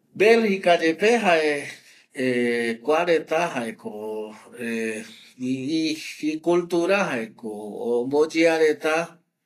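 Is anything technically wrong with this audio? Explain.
Yes. Throughout the speech, the audio was likely squeezed through Vorbis compression at a low quality setting. The encoder models each frame as a smooth spectral floor and spends few bits on the detail above it, so the treble is quantised so coarsely that fine structure turns into noise of similar energy. Nothing survives above 14.2 kHz, and the damage is plainly audible: a hissy, grainy top end, roughened tones and softened consonant attacks, which fits a bitrate near 32 kbps.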